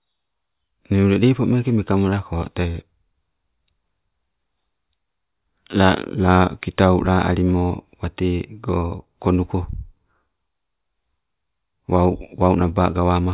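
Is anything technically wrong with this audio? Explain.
No technical faults are audible.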